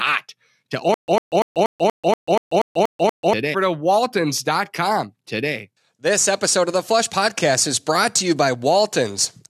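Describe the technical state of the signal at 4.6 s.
A stream segment repeat covers this moment. From 3.53 s to 5.53 s, the speech plays a stretch it has already played. That adds about 2.0 s to the clip. The player fetched or queued the same chunk of the stream twice and played both copies in sequence. At the jump back to the start of the duplicate there is a small blip. The speech then carries on from the earlier point as though the second pass were new.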